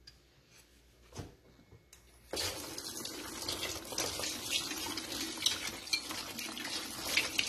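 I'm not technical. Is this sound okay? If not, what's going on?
No. The audio was most likely squeezed too hard with AAC compression, which saves space by throwing away detail it guesses the ear won't miss. Throughout the clip, the sound is dull and smeared, with a warbly, fizzy edge on steady tones and hissy sounds.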